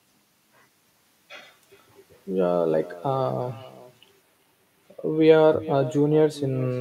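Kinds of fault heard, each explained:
Echo with no canceller: The far end is playing the call out loud, their microphone picks it up again, and nothing strips that copy out before it comes back down the line. Here every bit of the speech is trailed by a faint, thinner repeat roughly 0.4 s later, sitting about 18 dB under the direct sound, and it runs through the whole clip, so it reads as a steady ghost rather than a one-off.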